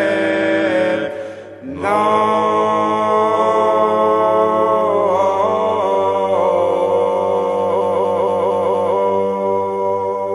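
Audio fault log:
0.28–0.47 s, 5.90–5.96 s, 7.76–8.92 s: repeated frames. Blocks of 186, 46 and 232 ms replay, the last five extra times, so each stutters.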